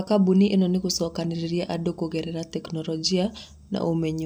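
Speech recording with no technical faults to be heard.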